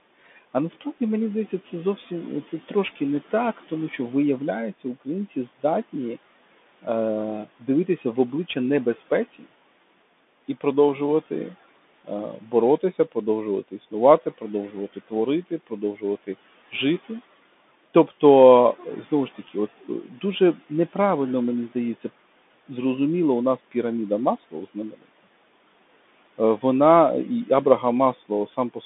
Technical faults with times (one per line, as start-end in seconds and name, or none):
0.00-28.86 Bluetooth CVSD headset codec
1.97-9.53 speech cut by the noise suppressor
10.48-22.70 speech cut by the noise suppressor
23.71-25.27 speech cut by the noise suppressor
26.38-28.84 speech cut by the noise suppressor